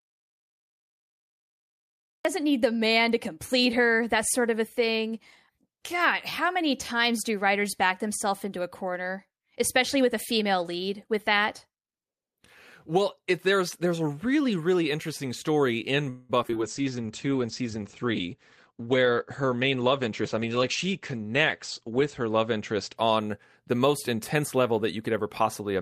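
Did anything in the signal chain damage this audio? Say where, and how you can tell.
Yes. The clip opens in total silence with no room tone at all, and speech only arrives at 2.25 s with "need the man to". That is an audio dropout to silence, already under way when the recording starts. The silence points to the input stage rather than the room. The likely cause is a device or link that was not yet delivering audio while the recorder kept writing silence, so whatever came before is lost.

From 16.09 to 16.57 s, just after "really interesting story in", the speech turns choppy and metallic, with pieces dropping out. This is repeated packet loss (robotic sound) on the network leg. Five gaps fall in that half second, and about half of the stretch is concealment. The receiver filled roughly 240 ms by extending the last sound, and about 80 ms is simply missing. The longest hole lasted 199 ms.

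Immediately afterward, from 16.63 to 23.03 s, the voice goes rough and muffled, with the top end gone. This is a call bitrate drop in the codec stage. The bandwidth estimate collapsed, and the Opus encoder fell from 48 to 13 kbps, holding the floor for about 5.6 s. At that rate it codes coarsely and narrows the audio band from 20 kHz to 8 kHz, which accounts for the dull, watery texture until the bitrate recovers.

Between 16.82 and 17.29 s, speech drags at unchanged pitch, with sounds drawn out. This is a jitter buffer slow-down at the receiver. With the buffer running low, it rebuilt its reserve by repeating single pitch periods and pause fragments, adding 48 ms. Playback ran at about 91% speed over that half second, so the stretching is audible without any pitch drop.

From 18.14 to 20.48 s, the talking sounds hurried, again at normal pitch. This is a jitter buffer speed-up. Delayed packets apparently arrived in a bunch, leaving the buffer overfull, so the receiver trimmed short pitch-period slices repeatedly to cut latency. 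Around a fifth of a second was removed over those 2.3 s, giving about 108% speed and a rushed delivery.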